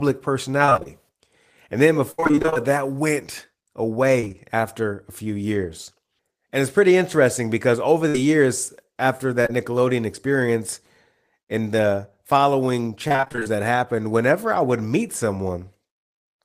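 Repeated packet loss (robotic sound) hits the speech at 0.65 to 0.87 s, 2.11 to 2.57 s and 4.20 to 4.37 s. In each stretch the stream keeps dropping or delaying packets: six, eleven and four gaps. Each hole is patched by extending the preceding sound, so roughly half of every span is synthetic. The result is choppy speech with bits missing. The 2.11 s stretch is roughest, with one gap lasting 70 ms.

A burst of packet loss follows at 8.09 to 8.16 s. About 60 ms of consecutive audio never arrived in time. The receiver stretched the last sound across the hole while fading it, which gives a brief held buzz or dying hiss. The speech then picks up further along, with that slice gone.

Short concealed packet loss occurs twice back to back, at 9.42 to 9.47 s and 9.47 to 9.50 s, each losing about 20 ms. The decoder bridges each gap by continuing the previous pitch or noise and blending back in. 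This is heard as a quick smear or wobble rather than a clean break, and a brief consonant may drop out.

Repeated packet loss returns at 13.08 to 13.57 s. Ten gaps, none longer than 23 ms, leave about half the span concealed. The speech turns choppy until it clears.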